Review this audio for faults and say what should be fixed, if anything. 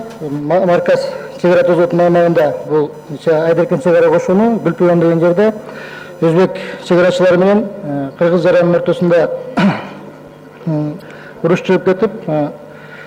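Three short bursts of damaged data in the compressed stream, at 2.37–2.40 s, 5.46–5.50 s and 10.98–11.02 s, each brief. Corrupted bytes made the decoder misread frames and lose sync until the next header. Verify transfers with checksums and keep metadata out of the audio payload.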